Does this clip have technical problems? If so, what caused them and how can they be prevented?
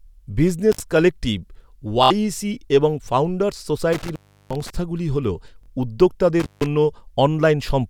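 Yes. Intermittent contact cuts the speech out with crackly edges and faint hiss at 0.72–0.80 s, 3.93–4.70 s (just after "এবং ফাউন্ডার্স") and 6.40–6.66 s, as a loose plug opens for about 53, 350 and 170 ms. Reseating or replacing the cable and connector prevents it.

Bluetooth stutter makes a short, buzzing repeat at 2.04–2.11 s and 5.63–5.68 s. The receiver replayed its last buffer through about 70 ms and 46 ms of lost data, which fits two or three dropped packets. A closer, less crowded radio link prevents it.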